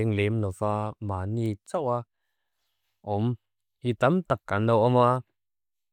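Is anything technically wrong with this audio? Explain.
Yes. Word clock ticks occur from 0.23 to 5.16 s: about five sharp clicks, roughly every 1.5 s, each a one-sample slip from an unlocked clock drifting around 15 ppm. They appear as thin vertical spectrogram lines and single-sample waveform spikes.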